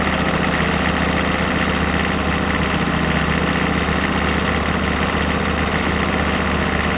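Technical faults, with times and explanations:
No technical faults are audible anywhere in this recording of sounds.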